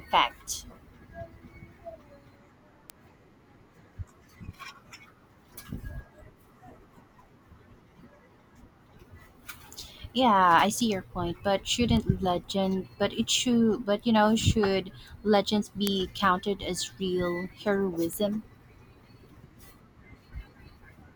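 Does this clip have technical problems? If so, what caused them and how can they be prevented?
Yes. This speech clip contains five bit error spikes, single isolated ticks at 2.90 s, 10.81 s (just before "your point but"), 11.97 s (just after "your point but"), 15.87 s (between "you know should legends" and "counted as real"), and 18.13 s. Each is a single sample jumping to about -14, -20, -20, -2, and -20 dBFS. That is the signature of one flipped bit in memory or on a digital link, which throws the value off by a power of two before it snaps back. On a waveform each shows as a one-sample needle standing apart from the surrounding signal; on a spectrogram, as a hairline vertical stripe running through the whole frequency range. The one at 15.87 s is the loudest. Using error-checked memory and digital links with checksums or CRC protection, and replacing failing cables or hardware, prevents these flipped bits.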